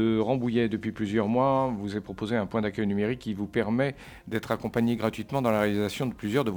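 From 4.04 s to the end, the audio shows sample clock jitter. The converter's timing wanders by something like ten microseconds, so each sample lands slightly off its ideal instant. The resulting error tracks how steeply the waveform is changing, sitting roughly 25 dB below the signal. It comes through as a grainy hiss that thickens on loud, bright passages and falls away wherever the sound drops to silence.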